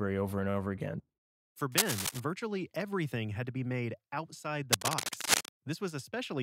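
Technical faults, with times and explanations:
1.72 to 2.20 s and 4.71 to 5.57 s, cable scratch noise: dense, uneven bursts of scratching and rustling sit over the speech. The first is about as loud as the speech. The second is longer and about 5 dB louder. A worn connector being moved is the likely cause, its contact resistance jumping rapidly.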